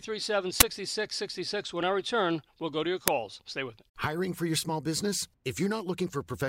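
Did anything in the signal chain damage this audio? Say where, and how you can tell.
Yes. An uninitialised buffer shows up twice, at 0.60 s and at 3.08 s, just after "we'll go to your". The first is a brief, harsh burst of digital noise and the second a loud crack, both breaking into the speech. This is a driver or buffer-stage fault. A block was sent to playback before audio had been written into it, so leftover memory was played as samples. The burst lengths point to a 512-sample block first and a 128-sample block second.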